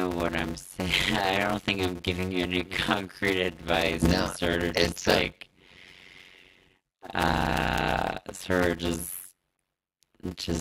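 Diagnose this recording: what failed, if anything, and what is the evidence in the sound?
Block size mismatch (padded) throughout, at the driver or buffer stage. Short writes, which fit 256-sample blocks, are zero-padded to the reader's larger size, leaving a gap in every block: a steady 91.9 Hz buzz, and speech slowed to 0.53 times normal speed with its timbre unchanged.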